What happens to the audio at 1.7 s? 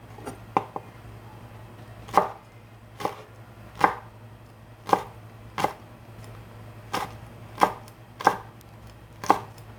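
Nothing goes wrong at 1.7 s: the sound there plays through intact, with no dropout, click, distortion or other audible fault.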